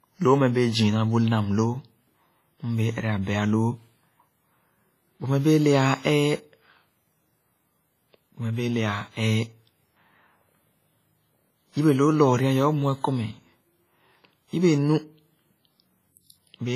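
From start to finish the speech has nothing above 15.4 kHz. A spectrogram shows a flat ceiling there, with smeared, watery detail beneath. This is low-bitrate audio saved at a high bitrate: likely a very low-rate encode later re-saved as MP3, which cannot restore what was discarded.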